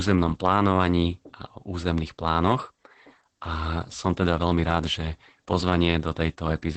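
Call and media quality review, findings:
Opus voice compression, whole clip: speech muffled, hoarse and slightly robotic, with nothing audible above about 8 kHz. SILK speech coder in wideband mode. Coarse excitation coding and heavy damage point to a low bitrate, around 10 kbps.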